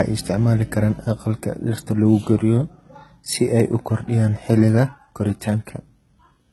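Right through the speech the treble sounds bright but fake, the s sounds gritty and metallic, and nothing comes through above 11.8 kHz. That's likely heavy HE-AAC compression, which fits a bitrate around 16 kbps: the top end is rebuilt from copied lower bands rather than coded.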